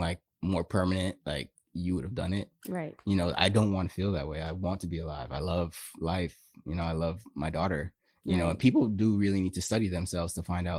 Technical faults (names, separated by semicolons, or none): lost packet rebuilt from error correction